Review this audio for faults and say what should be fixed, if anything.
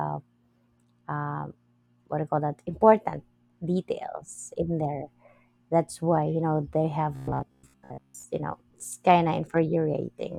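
Robotic sound from repeated short buffers runs from 7.16 to 8.25 s: the speech collapses into a rigid metallic buzz near 66.8 Hz, likely because late-arriving audio was covered by looping a roughly 15 ms fragment, replacing most of the real signal. Preventing it means giving the audio path enough buffering or scheduling priority so fresh samples always arrive before playback needs them.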